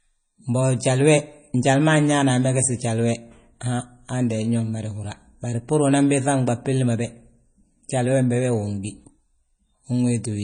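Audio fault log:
throughout, low-bitrate audio saved at a high bitrate: the speech has nothing above 9.4 kHz and carries the smeared, watery texture of heavy MP3 compression, even though the file is large. This likely comes from a very low-bitrate MP3, around 32 kbit/s, re-encoded at a high bitrate, which cannot restore the removed detail. On a spectrogram the energy stops at a flat ceiling near 9.4 kHz, with blotchy, patchy detail below it.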